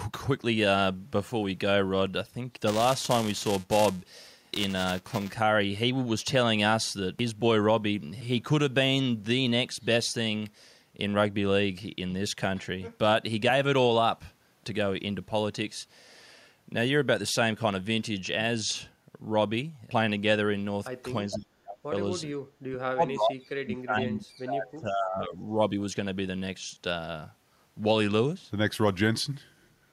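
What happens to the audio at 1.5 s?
Nothing goes wrong at 1.5 s: the speech runs on intact there, with no dropout, click or distortion.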